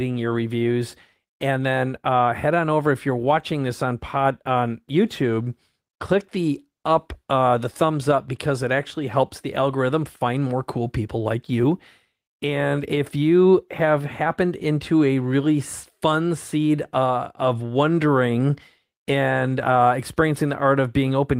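No technical faults occur at any point in the speech, so there is nothing to place in time order.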